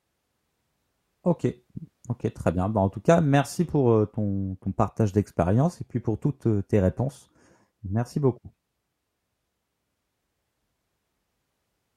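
No technical faults can be heard anywhere in the speech. Nothing in the audio calls for comment.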